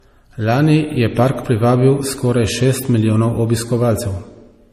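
A speech recording with transcoding between lossy codecs throughout: swirly, smeared artefacts of two kinds overlap, and nothing sits above 15.1 kHz, showing on a spectrogram as a hard ceiling with blotchy high bands. The likely cause is a low-rate MP3 stage re-encoded to AAC-LC.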